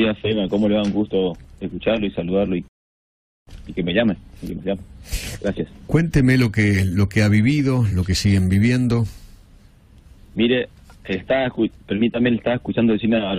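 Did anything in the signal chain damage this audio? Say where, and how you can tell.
Yes, at playback. A rebuffering stall runs from 2.68 to 3.47 s: the player starved and went silent, adding 788 ms, then resumed exactly where it stopped.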